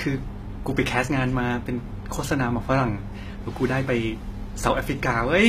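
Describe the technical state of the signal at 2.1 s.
At 2.1 s you're hearing damage that runs through the whole clip: the top end sounds synthetic, s sounds come out gritty, and nothing sits above about 14.9 kHz. That's likely HE-AAC compression, which fits a low bitrate around 20 kbps. Only the lower band is really coded. The treble is patched in by copying lower bands upward under a coarse envelope, so its harmonics don't line up with the real ones.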